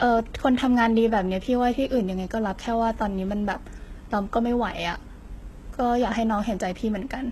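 Speech, with HE-AAC compression damage running through the whole clip. The sound stops dead at about 12.3 kHz, and the treble below that is bright but synthetic: s sounds come out gritty and lispy because the upper band is rebuilt from copied lower bands rather than coded. The damage is heavy, which fits a very low bitrate near 16 kbps, likely from an HE-AAC v2 encode using spectral band replication.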